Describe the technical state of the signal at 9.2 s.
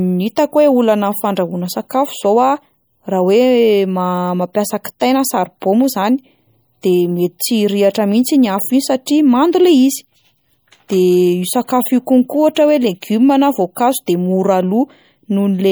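At 9.2 s the speech sounds watery and swirly, with chirpy, metallic s sounds, as it does throughout the clip. The likely cause is MP3 compression at a low bitrate, around 64 kbps, which drops weak frequency lines frame by frame. That flickering texture sets it apart from a plain low-pass filter, which would only dull the sound.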